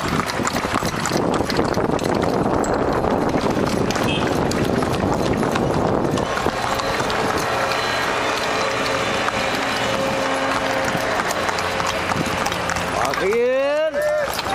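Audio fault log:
Nothing to log here; I listened all the way through and didn't catch a single thing worth flagging.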